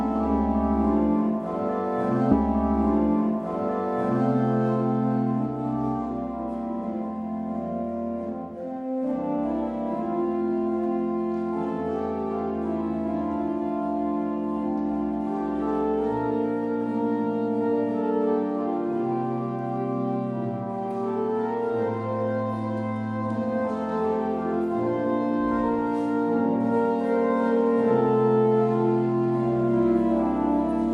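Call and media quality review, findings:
Stream segment repeated, 2.31–4.31 s. Player or fetch layer queued the same media segment twice; 2 s of audio replays, adding 2 s to the timeline, with a brief discontinuity blip at the jump back around 2.31 s.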